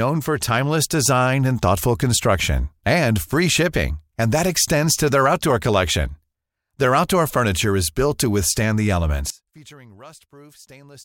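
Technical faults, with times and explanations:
9.30 to 11.04 s, one channel inverted: right after "built to withstand the", the speech drops by about 25 dB and turns faint, staying that way to the end. The likely cause is one stereo channel flipping polarity, so when the two sides get summed to mono, everything they share, which here is nearly all of the centred speech, cancels out. What's left is just the small difference between channels, hence that ghostly remainder.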